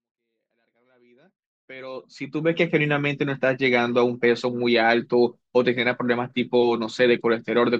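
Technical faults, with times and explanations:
No technical faults are present.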